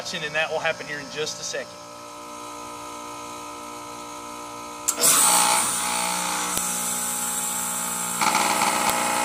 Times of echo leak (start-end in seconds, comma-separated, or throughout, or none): none